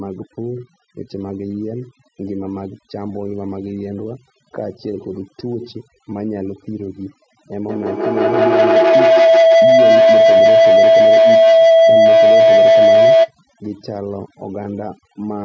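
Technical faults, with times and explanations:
throughout: overdone noise removal. A noise reducer set far too aggressively pulls individual frequency bands down or off whenever they sit close to what it has judged to be noise, and the softer parts of the speech get removed along with the hiss. The background drops to near silence scattered with small twinkling specks, while the voice loses the quiet detail that should surround each sound.
7.68–13.35 s: feedback howl. Two devices in the same room joined the same call, so sound travels from one microphone out of a loudspeaker and back in, gaining level on each trip. Rather than dying away, the repeats narrow onto a tone around 700 Hz that the loop favours and swell to about 14 dB above the speech, with the loop coming round roughly every 150 ms, until the loop is broken.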